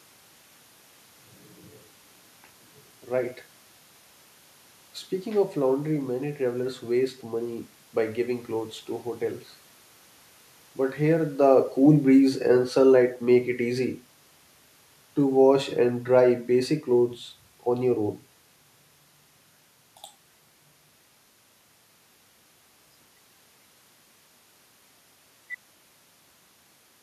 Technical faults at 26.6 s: none

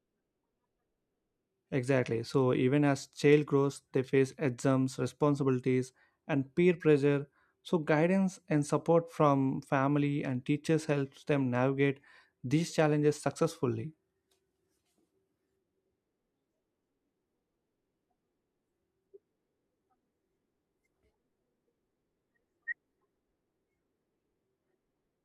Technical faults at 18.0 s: none

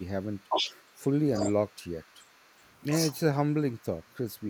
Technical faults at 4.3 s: none

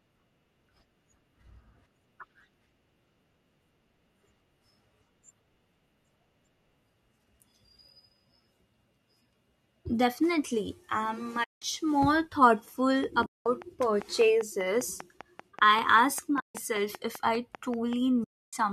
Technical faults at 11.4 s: AAC frame loss with muting

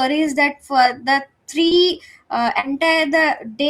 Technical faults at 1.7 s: short concealed packet loss

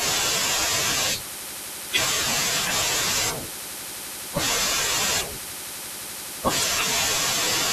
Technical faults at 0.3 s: none

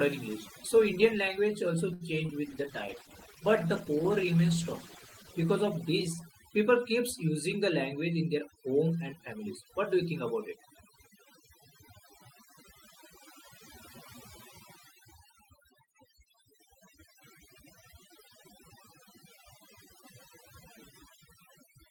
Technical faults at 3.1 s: overdone noise removal; call bitrate drop

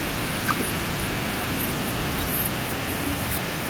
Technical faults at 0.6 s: none

